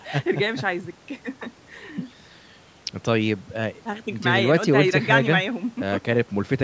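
Listening to this speech recording, which carries the usual call microphone processing with nothing above 8 kHz, nothing technical stood out.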